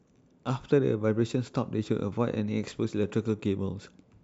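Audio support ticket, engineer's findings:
No audible faults found in the speech clip. No further action on this ticket.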